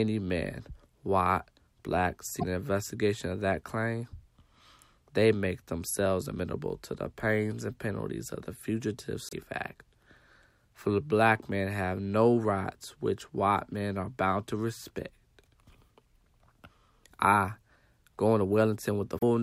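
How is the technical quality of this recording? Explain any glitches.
Three brief glitches break the recording, at 2.39–2.44 s, 9.29–9.33 s and 19.19–19.23 s. Each lasts about 40 ms: the audio skips forward and the first frames after the jump come out mangled. The likely cause is a broken MP3 bit reservoir, where frames that follow a cut borrow data from a missing frame. The glitch spans roughly one to two 26 ms frames. In the waveform it is a jagged discontinuity.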